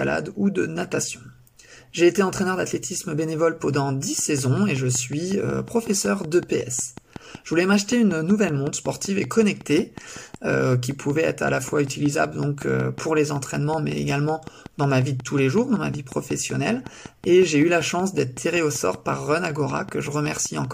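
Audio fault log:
4.19 to 20.66 s, train of clicks: a steady ticking starts here and keeps going right to the end, about 5.35 clicks per second at an even spacing, so around a hundred of them in all. Each one has much the same sharp shape and pokes out roughly 5 dB above the sound, and you hear them in the quiet gaps as well. A pulse repeating that regularly is likely interference from nearby equipment or a faulty connection or power supply.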